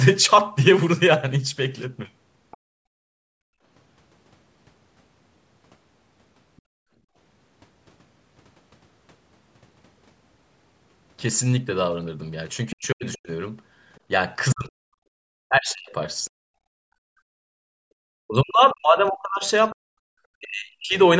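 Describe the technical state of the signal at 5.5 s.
At 5.5 s the speech signal is intact, with no fault present; it simply carries the band limit of call microphone processing, with nothing above about 8 kHz.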